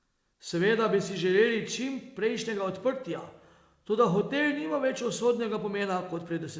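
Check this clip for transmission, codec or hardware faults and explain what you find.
No transmission, codec or hardware faults can be heard; the speech comes through a WebRTC call path whose band-limited sound, with nothing above 8 kHz, fits G.722 wideband coding at 64 kbps working as intended.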